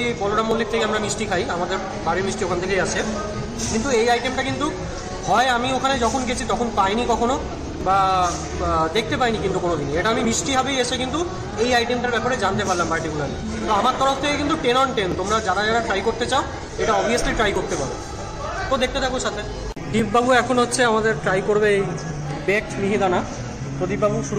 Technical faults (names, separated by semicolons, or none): clock drift buffer slips